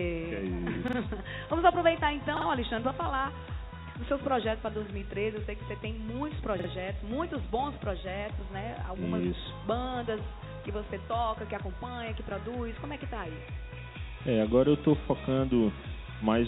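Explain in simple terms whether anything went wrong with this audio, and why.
A quick stutter, where one sliver of sound plays three times in a row with hard joins, is heard at 0.88, 2.37 and 6.60 seconds. This is a repeated buffer: new audio arrived late, so the device replayed its last chunk of about 46 ms twice more.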